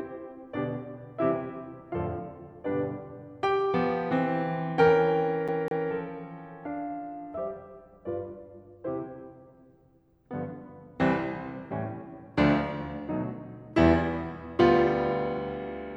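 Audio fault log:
5.48 to 5.89 s, CD stuck on one turn. The music catches on a fragment about 0.20 s long and plays it twice in a row. Each jump back brings a brief mute. The result is a quick, evenly spaced stutter. The laser is thrown back one track at the same point on each rotation, most likely by a scratch. So the same slice of music returns at a steady rate until playback moves on.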